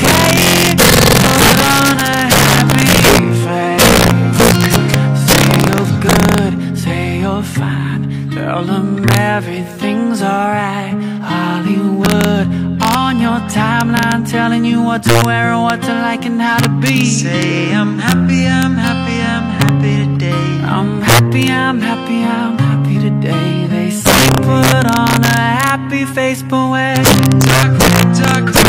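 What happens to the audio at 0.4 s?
Integer overflow runs through the whole clip, including 0.4 s. Peaks driven about 3 dB past the limit wrap to the opposite sign, causing violent cracks on a small fraction of loud moments.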